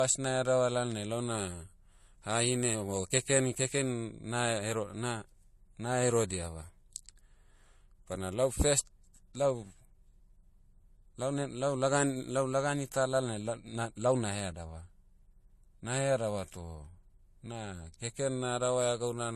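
Across the whole recording the speech sounds dull, with nothing above about 13.2 kHz, and two kinds of coding artefact are layered together. The cause is likely transcoding between lossy codecs, with MP3 coding at a rate that fits 64 kbit/s and then AAC-LC at around 48 kbit/s. The second codec spent bits re-encoding the first one's damage, and the lower cut-off remained.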